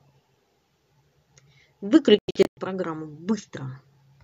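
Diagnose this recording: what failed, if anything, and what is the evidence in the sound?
The broadcast reception stage failed: a digital broadcast dropout, with the receiver muting whenever frames arrived corrupted or missing. Between 2.19 and 2.58 s the speech breaks into several short silent holes, the longest 96 ms, losing 264 ms of audio outright.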